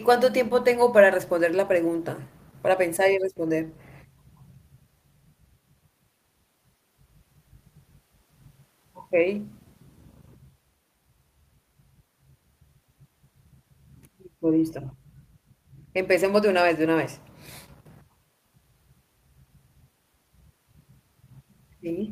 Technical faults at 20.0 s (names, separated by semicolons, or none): none